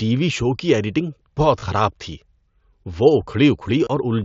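At 1.59 to 1.63 s and again at 3.84 to 3.87 s there's concealed Bluetooth headset packet loss. About 30 ms and then 23 ms go missing, and the receiver patches each gap by repeating a recent stretch of waveform. You get a brief buzzy hold and a slight warble as real sound resumes, over the 8 kHz ceiling of the mSBC link.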